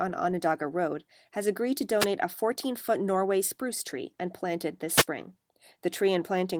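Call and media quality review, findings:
Wireless microphone noise hit, 1.98 to 2.07 s: RF fade at the analogue FM receiver as reflected paths cancel; receiver noise floor rises into a short static swish over speech, about 85 ms.

Wireless microphone noise hit, 4.93 to 5.06 s: second, longer fade dip on the same radio link; a burst of static over speech for about 130 ms. Light Opus hybrid-mode coding at 20 kbps, fullband, runs across both events.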